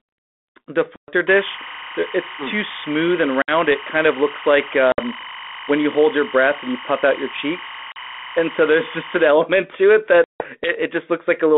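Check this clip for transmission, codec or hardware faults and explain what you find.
Two faults are present: packet loss on an ADPCM call, and timecode bleed. The G.726 line carries the speech band-limited to roughly 250 Hz to 3.5 kHz.

Packet loss on an ADPCM call hits at 0.96, 3.42, 4.92, 7.92 and 10.24 s. Holes of 40 to 160 ms go hard-silent. The decoder's predictor then mistracks, so speech returns slightly distorted.

Timecode bleed runs from 1.27 to 9.27 s. A warbling chirp switches between about 1 and 2 kHz at 25 frames per second. It sits about 15 dB under the speech.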